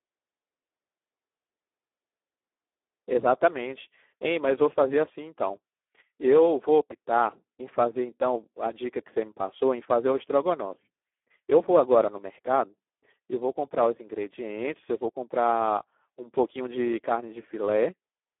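Throughout, the speech carries heavy Speex codec damage. It sounds hoarse and noisy because too few bits reach the excitation, which fits a rate near 8 kbps. A plain 300 Hz to 3.5 kHz telephone band would sound clean; here the grit sits inside that band, with nothing above 3.8 kHz.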